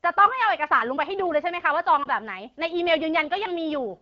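At 2.04 to 2.08 s there is a lost AMR speech frame: a short dip or warble, consistent with a single 20 ms frame failing its check. The decoder fills the gap by repeating the previous pitch and vocal-tract parameters at reduced gain, over otherwise clear AMR-WB audio.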